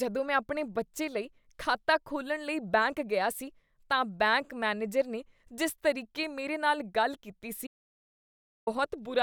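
At 7.67 s, right after "ਮੇਰੇ ਨਾਲ ਗੱਲ ਕੀਤੀ", the speech stops abruptly and gives way to an audio dropout to silence lasting about one second, until 8.67 s. The gap is dead silence with no room tone underneath, so whatever was said in that second is gone. The likely cause is a momentary loss of the input signal, such as a disconnected device or a failed link, while the recorder kept writing silence.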